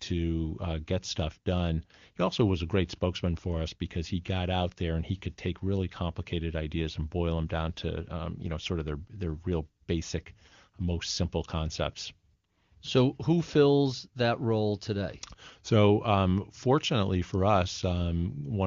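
No technical faults can be heard in the speech. It has passed through the AMR wideband (HD Voice) codec, and the sound points to one of its higher bitrates, around 24 kbit/s, with at most a faint trace of coding.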